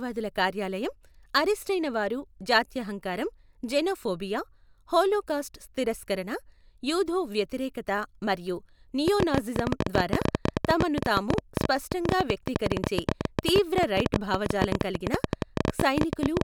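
Something, likely interference from nearby equipment or a faulty connection, begins injecting short pulses into the speech at 9.08 s and keeps going until 16.42 s, producing a train of clicks. They arrive about 13.1 times per second at an uneven pace, roughly a hundred in all, each with much the same shape and peaking some 20 dB above the signal. The result is a sharp, jittery ticking laid over the speech and through its pauses.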